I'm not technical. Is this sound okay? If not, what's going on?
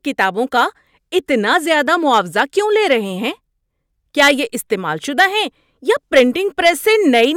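Yes, no faults audible in this speech recording.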